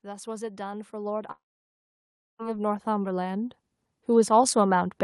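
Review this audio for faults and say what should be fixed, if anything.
Automatic gain rising runs from 0.05 s to 4.93 s. The gain control judged the input too quiet and kept pushing it up, about 19 dB in total, so the speech and the background swell together. On a waveform the envelope widens steadily across the clip. On a spectrogram the whole picture, noise floor included, brightens from left to right. To prevent it, set the input level correctly at the source and limit how far and how fast the gain control may climb.

A long network dropout cuts the speech at 1.31 s, and it resumes at 2.42 s with about 1.08 s of audio gone. The last sound is stretched into a fading buzz or hiss, then about a second of near silence follows. This is likely caused by packets never arriving. A spectrogram shows a smeared tail decaying into a blank band, and a waveform shows a flat gap. To prevent it, improve network stability or enlarge the jitter buffer and add packet redundancy such as forward error correction.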